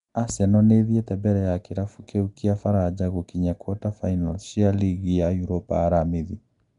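Nellymoser compression runs throughout this speech, likely from Flash's Asao codec: a rough, hissy, underwater smear with nothing above 10.6 kHz, consistent with roughly 44 kbps.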